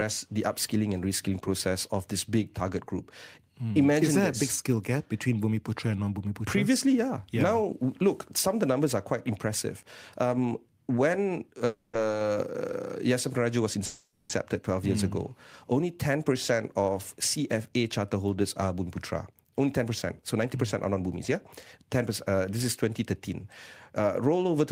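At 11.66 to 11.97 s and again at 13.86 to 14.33 s there are two call audio freezes, most likely from packets held up in transit so that the jitter buffer ran dry. The receiver stretched the last sound into a fading buzz-like tail rather than dropping to silence, about 280 ms the first time and 440 ms the second. When the audio resumes it picks up exactly where it stopped, so nothing is lost, but the speech arrives that much later.

From 18.74 to 21.01 s, just after "holders are", the jitter buffer speed-up begins. The buffer had built up more audio than it aims to hold, so the receiver trimmed many short pitch-period slices in a row to reduce the delay. The speech runs about 8% fast at an unchanged pitch, and it sounds hurried. Over the stretch, roughly a fifth of a second of audio is taken out.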